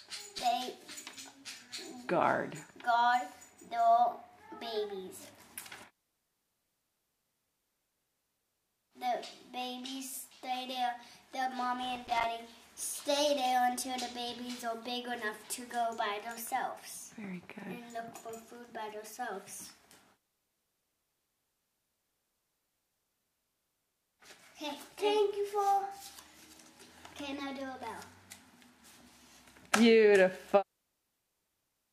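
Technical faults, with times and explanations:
0.38 to 0.46 s and 11.83 to 12.24 s, loose connector crackle: a worn contact rapidly makes and breaks, chopping the signal into an irregular scratchy burst. The waveform shows ragged dropouts and spikes, and the spectrogram shows scattered broadband vertical streaks across both spans.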